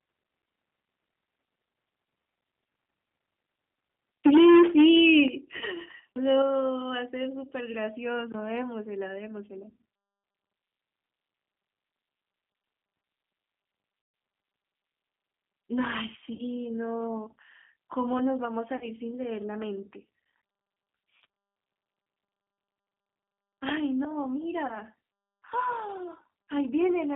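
Throughout, the audio has the rough, slightly synthetic texture of the G.729 codec, consistent with 8 kbit/s and confined to about 200 Hz to 3.5 kHz. The damage is plainly audible, but it is steady rather than arriving in bursts like the faults below.

From 4.24 to 5.23 s there is microphone overload. Peaks run about 11 dB past full scale and nearly a third of the waveform is flattened. The result is a harsh crackle on loud syllables that follows the signal's loudness, not a tonal smear. The likely cause is an input level set too high.

Within that stretch, at 4.27 s, the microphone volume stepped down by about 2 dB. It stepped down again by about 9 dB at 5.28 s and by about 4 dB at 6.42 s. Voice and background drop together in one clean step with no added distortion, unlike the fade of concealment. This is likely the call software reacting to the clipping.

VoIP packet loss concealed by the speech codec follows at 5.57 to 5.63 s (40 ms), 14.02 to 14.14 s (120 ms), 16.33 to 16.42 s (60 ms), 18.77 to 18.85 s (40 ms) and 21.22 to 21.24 s (20 ms). 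The decoder extrapolates from its last pitch and filter, lowering the gain as it goes, and the longest gap fits six 20 ms packets.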